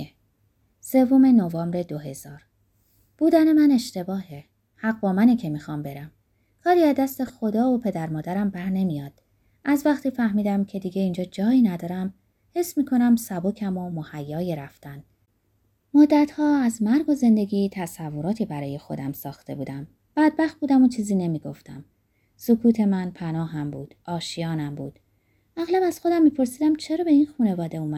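At 7.27 to 7.30 s there's a corrupt frame decoded: a short blip in the speech, around 25 ms, that sounds like a tiny chirp or squeak. Some bits in a compressed frame got flipped, and the decoder played it anyway. Misread codes or gains dumped energy into the wrong frequencies for the frame's length. The duration points to a single damaged frame, with the stray burst peaking somewhere near -25 dBFS.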